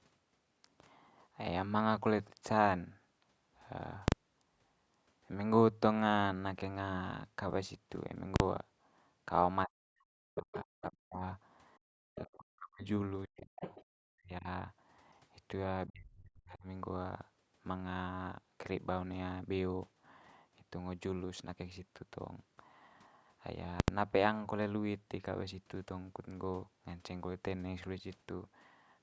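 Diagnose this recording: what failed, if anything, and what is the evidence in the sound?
Invalid numbers at full scale, in sample-format conversion: loud bangs at 4.08–4.12 s, 8.36–8.40 s and 23.80–23.88 s, where invalid values were pinned to maximum amplitude.

Speech suppressed in double talk, in call processing: the speech drops deeply, around 40 dB, at 9.66–11.23, 12.16–12.83, 13.25–13.62, 14.12–14.48 and 15.87–16.66 s, likely the canceller muting both talkers.

Background gated by the echo canceller, in call processing: the room sound drops by about 40 dB at 11.78–11.97 s, then returns once the canceller stops clamping the microphone.

The other side's voice is leaking through, in call processing: a second voice is faintly audible well below the main speech at 12.15–12.19 s and 13.61–13.85 s, likely residual loudspeaker echo the canceller missed.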